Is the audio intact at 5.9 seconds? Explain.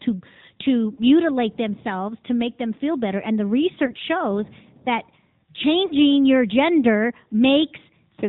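No. From 5.86 to 5.93 s there is a brief dip with a smeared warble, and the sound returns a little weak and rough. This is lost AMR speech frames. The 40 ms gap matches two 20 ms frames that failed their checksum after radio errors. The decoder filled the gap by reusing the last good pitch and vocal-tract settings at falling gain, which is why the sound is drawn out and fades rather than cutting off sharply.

That moment also carries the AMR narrowband mobile codec damage heard across the whole clip. Everything above 4 kHz is missing, and the voice has a plainly buzzy, synthetic edge. The 8 kHz sampling explains the missing top end. The buzz comes from rebuilding the sound from a vocal-tract model driven by a few pulses per 5 ms subframe, and its degree fits a fairly high AMR-NB rate of about 10 kbps.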